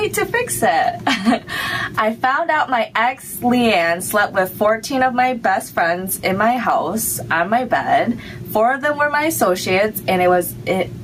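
Gain pumping runs throughout: the input gain is likely set far too high, so a fast limiter clamps each loud sound, leaving the level swinging by roughly 15 dB. Loud and soft parts end up closer in level, squashing the dynamics.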